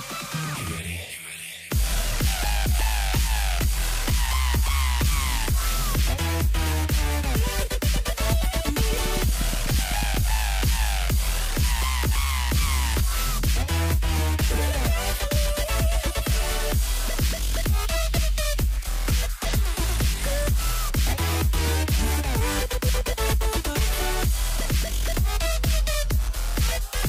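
Likely interference from nearby equipment injects a train of clicks from 7.24 to 10.15 s, regular pops at 8.3 per second ticking above the sound.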